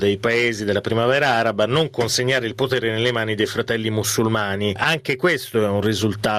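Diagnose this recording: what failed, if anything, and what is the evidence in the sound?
Gain pumping runs through the whole recording: the gain swings by around 15 dB, leaving loud and soft passages squashed together. On a waveform the envelope looks flattened. The likely cause is input gain set far too high, with a fast limiter clamping each peak.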